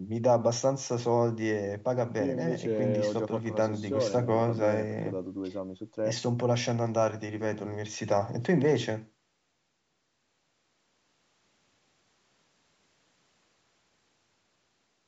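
No technical faults can be heard in this speech recording.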